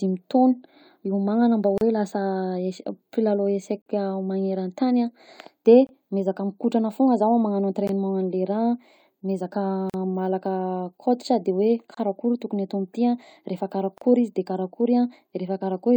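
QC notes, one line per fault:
1.78 to 14.02 s, gap between stream segments: brief hard-edged dropouts to silence at 1.78–1.81, 3.82–3.86, 5.87–5.89, 7.87, 9.90–9.94, 11.94–11.97 and 13.98–14.02 s, every 2 s and lasting 17 to 45 ms each. The segment timestamps don't quite meet, so the player pads the hole with silence. No audio is actually lost.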